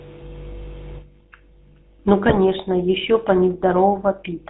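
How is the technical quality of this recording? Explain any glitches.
The recording has plainly audible codec damage from start to finish, plus one short burst of corruption.

GSM full-rate codec, throughout: the speech is rebuilt from a vocal-tract model driven by sparse pulses, with nothing above 4 kHz. The result is a buzzy, gravelly roughness that fits 13 kbps GSM.

GSM bit errors, 2.26 to 2.38 s: flipped bits corrupt the decoder's filter, pitch and gain values, so the speech briefly squawks and gargles over what sounds like roughly six frames.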